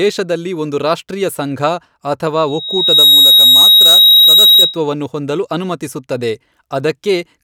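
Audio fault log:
2.47–4.79 s, loudspeaker feedback squeal: the microphone re-amplified its own loudspeaker until gain passed unity at 3.8 kHz, so a pure tone swelled over about half a second to sit roughly 10 dB above the speech.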